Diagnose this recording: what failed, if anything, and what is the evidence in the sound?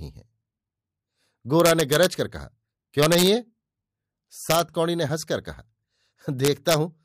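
Integer overflow in the fixed-point gain or sample-format conversion stage. Harsh cracks hit the speech at 1.60–2.05, 3.03–3.27, 4.50–4.60 and 6.45–6.74 s, where the level runs only about 1 dB past full scale. Those peaks wrap to the opposite sign instead of being limited, which is far nastier than clipping.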